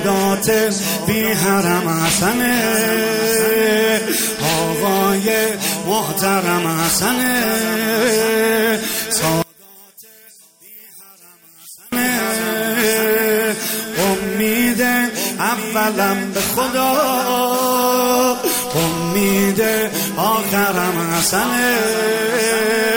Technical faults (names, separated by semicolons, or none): one channel inverted